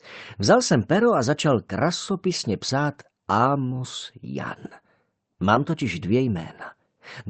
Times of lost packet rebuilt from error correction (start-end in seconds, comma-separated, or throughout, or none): 5.55-5.57